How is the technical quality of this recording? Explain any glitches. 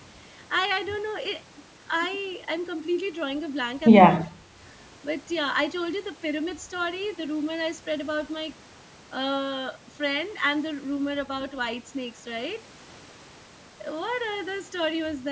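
One glitch stands out: a brief drop in the speech level. The audio has passed through call microphone processing, and nothing reaches above 8 kHz.

From 4.25 to 4.54 s, the speech is likely suppressed in double talk. The echo canceller seems to have heard the far side talking at the same moment, misjudged the near talker as loudspeaker echo, and attenuated both together. For roughly 0.3 s the voice sinks by around 20 dB before recovering.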